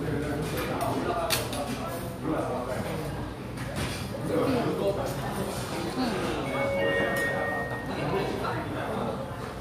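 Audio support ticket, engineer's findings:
Engineer's findings: no audio fault found in this clip; nothing to action on the ticket.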